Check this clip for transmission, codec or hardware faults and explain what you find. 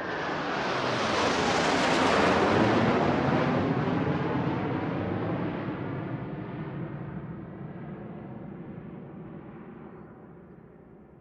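I found no faults in this clip.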